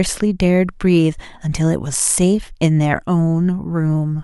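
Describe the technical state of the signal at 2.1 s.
At 2.1 s the speech signal is intact, with no audible technical fault.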